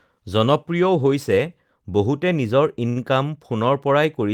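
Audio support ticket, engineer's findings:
Held, slightly buzzy sound at 2.89–3.13 s; short stall from a late packet. Jitter buffer ran dry, about 66 ms stretched, nothing lost, playback resumed in place.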